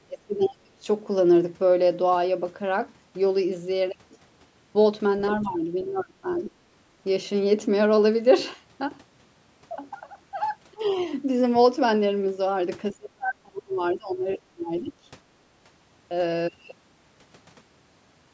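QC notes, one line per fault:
0.07–0.83 s: speech suppressed in double talk. Level dips by about 20 dB for roughly half a second, likely the echo canceller ducking the talker during crosstalk.
5.31–5.37 s: other side's voice leaking through. A brief scrap of a second voice at about 15 dB below the talker, likely residual loudspeaker echo the canceller missed.
5.41–6.52 s: speech suppressed in double talk. About a second of the talker pulled down, up to about 25 dB, likely suppression while both ends spoke.
10.73–10.83 s: speech suppressed in double talk. A short dip of about 25 dB lasting around 100 ms, likely the canceller clamping down on overlapping talk.
10.87–11.02 s: other side's voice leaking through. A faint trace of the far voice at about 35 dB below speech, likely uncancelled echo residue.
12.93–14.27 s: speech suppressed in double talk. The talker is attenuated, up to about 30 dB, for roughly a second in total, likely from double-talk suppression.
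14.55–14.96 s: speech suppressed in double talk. A dip of about 20 dB across some 400 ms, likely the canceller treating the talker as echo.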